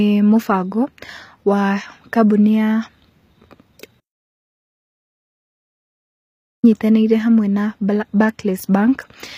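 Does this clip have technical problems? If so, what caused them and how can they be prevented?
Yes. Throughout the clip the speech treble sounds gritty and metallic, with lispy s sounds and nothing above 15.5 kHz. The likely cause is HE-AAC compression, which rebuilds the treble from copied lower bands, consistent with about 24 kbps. Encoding at a higher bitrate prevents this.

From 4.01 to 6.64 s the sound cuts out into about 2.6 s of complete silence with no room tone, returning at "hamwe na". This audio dropout to silence likely comes from a lost input while the recorder kept writing zeros. Secure connections and monitor input levels during recording.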